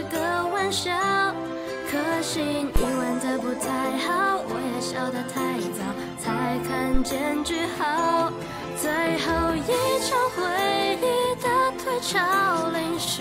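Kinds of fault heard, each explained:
Phantom power thump: a supply switched on or off on a live input pushes a step through the coupling capacitors, giving two deep thumps peaking about -10 dBFS and decaying within roughly 20 ms.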